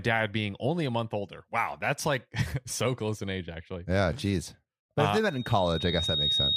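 At 5.25 s, right after "if uh they", a loudspeaker feedback squeal begins and runs to the end of the clip at 6.57 s. The microphone is picking up the loudspeaker it feeds, and around 3.7 kHz the loop gain exceeds one, so that tone feeds on itself. Unlike a steady interfering whistle, it swells from nothing over roughly a second until it sits around 5 dB above the speech.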